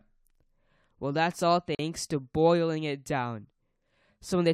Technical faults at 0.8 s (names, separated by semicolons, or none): none